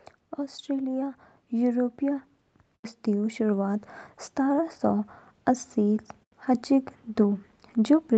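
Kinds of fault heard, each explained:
Automatic gain rising: The call's gain control decided the input was too quiet and gradually turned it up, so between 0.65 s and 2.29 s the speech and the background noise swell together by about 3 dB. Because both rise at once, it's clearly gain being applied rather than a change in the source. It's a slow ramp over roughly a second and a half, heard through a call path band-limited to 8 kHz.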